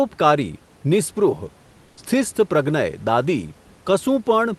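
From 1.85 to 1.97 s, a pause of about 120 ms shows comfort noise in place of the background. The real room noise, sitting about 35 dB below the loudest speech, gives way to a flat, featureless hiss roughly 3 dB quieter, likely because the Opus call path stopped transmitting during the pause and the receiver synthesised filler noise. On a spectrogram the textured noise floor turns into an even, smooth band; the waveform shows a slightly lower, uniform trace.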